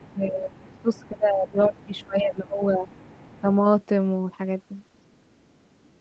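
From 0.00 to 0.14 s a faint second voice sits about 25 dB under the talker: other side's voice leaking through, likely loudspeaker echo that the echo canceller left in the microphone signal. It returns at 0.60 to 1.08 s (about 30 dB down), 1.48 to 2.04 s (about 20 dB down), and 2.58 to 3.41 s (about 30 dB down). On a spectrogram it shows as weak, separate harmonic traces beneath the main voice.

Across 0.14 to 2.94 s, about two seconds of the talker's speech is pulled down by up to about 20 dB. This is speech suppressed in double talk, likely the canceller turning everything down while both sides overlap. The waveform envelope caves in.

At 3.41 to 3.47 s there is a brief dip of about 10 dB.

From 4.96 to 5.50 s the leak is barely present, about 40 dB down.

From 5.86 s to the end, a drop of about 30 dB nearly empties the waveform for around 150 ms. Throughout, the spectrum stops at 8 kHz, as expected for an Opus call link at around 20 kbps.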